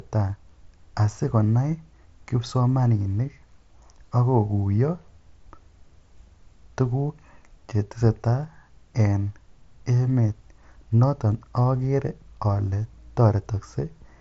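There are no technical faults to describe in this speech recording.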